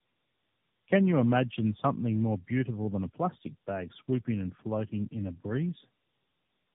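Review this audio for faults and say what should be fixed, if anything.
Tandem speech coding affects the whole clip. The speech sounds rough, muffled and warbly, with nothing above 3.8 kHz. That fits about three narrowband AMR encodes in a row, each coding the previous one's artefacts again. To prevent it, pass the coded speech between links unchanged, using transcoder-free operation, instead of decoding and re-encoding at each border.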